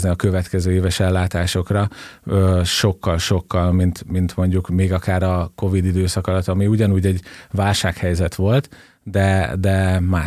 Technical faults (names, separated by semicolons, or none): none